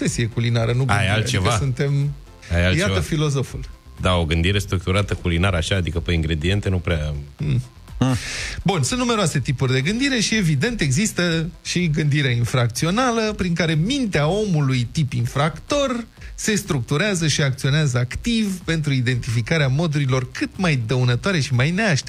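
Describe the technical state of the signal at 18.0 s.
At 18.0 s the signal carries mains buzz, present across the whole clip rather than starting or stopping near that moment. Sharp switching spikes, such as those from a dimmer, rectifier or unshielded lead, are entering the path twice per cycle of a 60 Hz supply, spreading harmonics of 60 Hz up into the several-kilohertz range. The result is a steady, raspy buzz sitting roughly 35 dB below the programme level.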